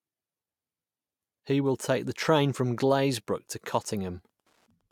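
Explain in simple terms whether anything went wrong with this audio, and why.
From 2.76 s to the end, a faint, steady ticking runs under the speech, about ten ticks a second. This is Wi-Fi interference. A nearby Wi-Fi radio sends a signal every 102.4 ms, and the audio circuit picks it up as clicks.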